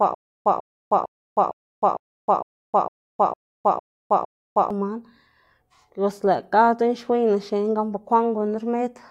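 From the start to 4.7 s, already under way, a stutter with silent gaps repeats one 146 ms burst ten times, each followed by about 310 ms of digital silence. The likely cause is a stalled stream replaying its last fragment. The waveform shows identical blocks every 456 ms, with flat, empty spectrogram gaps between them.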